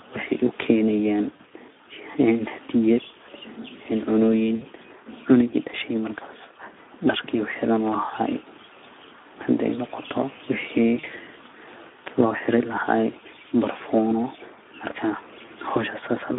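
Right from the start the whole thing carries Speex codec damage. The speech sounds hoarse and grainy, sitting in a narrow line band from 250 Hz to 3.6 kHz, with a thin excitation that fits a low setting of roughly 11 kbps.

Then there are four short bursts of VoIP packet loss concealed by the speech codec, at 1.36–1.41, 4.55–4.65, 10.99–11.07 and 15.45–15.50 s. In each one the decoder stretches the last sound into a fading smear, and the longest gap fits three lost 20 ms frames.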